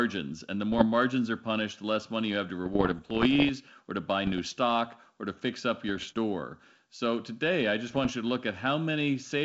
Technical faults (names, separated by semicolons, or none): bit errors on an ADPCM link